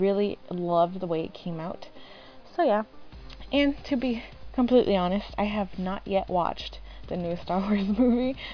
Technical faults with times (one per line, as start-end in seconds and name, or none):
none